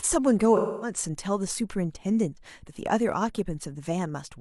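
A speech clip with AAC frame loss with concealment between 0.56 and 0.97 s. Roughly a quarter second of coded audio is missing, which fits a run of about six consecutive AAC frames. The decoder bridges the gap by reusing the last intact spectrum with randomised signs or interpolated energy. That produces a smeared, noisy stretch in place of the real speech until proper decoding resumes at 0.97 s.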